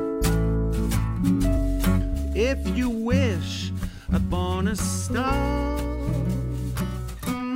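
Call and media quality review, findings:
Compressed frames skipped at 1.56 s: brief smeared blip, about 100 ms of audio missing. The probable cause is the decoder dropping roughly four 23.2 ms frames. Overlapping neighbour frames soften the join. On the waveform, the envelope jumps forward without a hard discontinuity. On the spectrogram, there is a short vertical smear and the time structure shifts abruptly.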